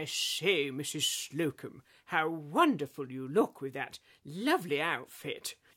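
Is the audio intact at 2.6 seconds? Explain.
Yes, the audio is intact at 2.6 seconds, with no dropout, click, distortion or other fault to be heard at that moment.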